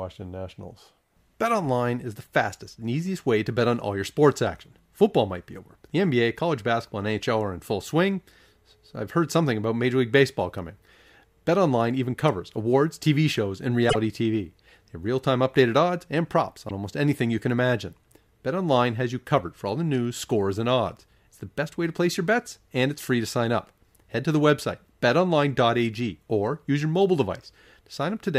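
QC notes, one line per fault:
13.89–13.96 s, broken MP3 bit reservoir: the audio skips ahead with a 70 ms garbled stretch, likely because frames were lost and the next frames read borrowed bytes from the wrong frame.
16.68–16.71 s, broken MP3 bit reservoir: the audio jumps again with a 26 ms disturbance, one frame long, likely because a gap sent that frame to misread reservoir data from another frame.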